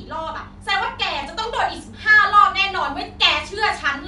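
At 1.23 s the speech has a repeated buffer. Fresh audio reached the output late, so the device replayed its last block, a piece about 1.45 ms long (which fits a 64-sample buffer), two extra times. Because the block is so short, the repeats come out as a tiny click or brief buzz rather than an audible stutter. Unlike a dropout, there is no silent gap and essentially no audio is lost. The sound is held, not cut.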